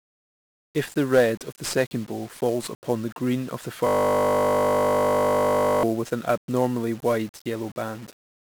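Throughout this speech clip the audio has passed through 1-bit DFPWM compression, a codec that spends a single bit per sample nudging an adaptive level up or down, and the coarseness is consistent with a low rate near 48 kbps. The damage is heavy: strong broadband quantisation noise leaves the speech fuzzy and crackly, with the upper frequencies sunk beneath a layer of hiss. From 3.87 to 5.83 s, right after "the green of the", a system hang loop occurs. The computer or driver stalled while the playback hardware kept replaying the same 20 ms stretch of its ring buffer, close to a hundred times in a row. Because that piece is so short, the repetition fuses into a steady buzz at 50 Hz rather than a stutter, and normal speech returns with "with an abnormally wide".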